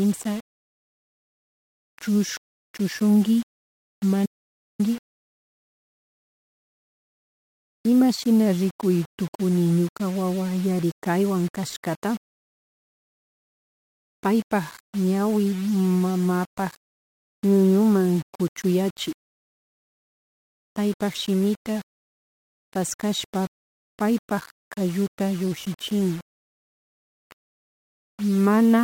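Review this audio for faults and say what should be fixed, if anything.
The speech carries grainy distortion that tracks the signal from start to finish, with the error sitting roughly 25 dB below the speech. Quiet passages turn gritty, and low-level detail either vanishes or flickers between adjacent steps. This is low bit depth without dither, and the likely cause is requantisation to a very coarse word length, consistent with about 6 bits, rounded with no dither applied, so the error is correlated with the audio rather than spread as noise. To prevent it, keep the chain at 16 bits or more and add dither whenever reducing word length.

Between 4.26 s and 4.79 s the audio drops out to silence, losing about 0.53 s. The speech stops abruptly and resumes mid-flow, and the gap holds no room tone at all, meaning the recorder kept writing digital silence while the input was absent. This is an audio dropout to silence, likely caused by a momentary loss of the input, such as a disconnected device, a failed link or an accidental mute, and the speech from that interval cannot be recovered from this file. 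To prevent it, secure connections and mute controls and monitor input levels during recording.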